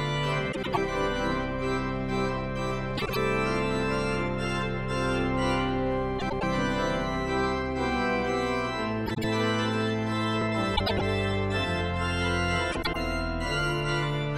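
This audio has a case of frames out of order, popping up six times: 0.52–0.78 s, 2.97–3.17 s, 6.19–6.43 s, 9.06–9.24 s, 10.76–11.02 s and 12.72–12.96 s. Each time, two neighbouring runs of decoded audio play swapped, so you get a short garbled flutter, but no time goes missing. The swapped chunks are about 104 ms or 78 ms long, which fits blocks of four or three codec frames.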